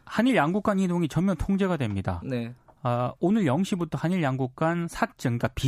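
No technical faults can be heard anywhere in this recording.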